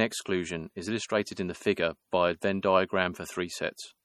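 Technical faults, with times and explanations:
Throughout, MP3 compression: an encoder likely starved of bits, fitting about 48 kbps, drops weak spectral lines frame to frame, giving a plainly audible watery swirl, with nothing above 19.6 kHz.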